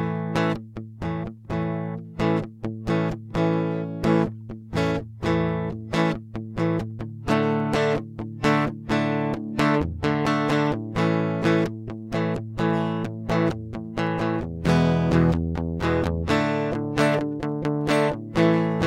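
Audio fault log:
0.11 to 18.86 s, clock slip clicks: a fine, evenly spaced rattle runs under the music, with ticks arriving about every 20 ms, several hundred in all, each a single sample jumping out of place. It most likely comes from two unsynchronised clocks differing by around a thousand parts per million, so the slips keep a fixed rhythm regardless of the music. That steady pace, rather than bursts that follow loud passages, is what separates it from random crackle or clipping.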